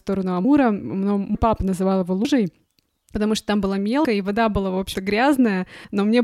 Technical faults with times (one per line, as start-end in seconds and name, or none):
0.45 audio missing between chunks
1.35 audio missing between chunks
2.25 audio missing between chunks
3.15 audio missing between chunks
4.05 audio missing between chunks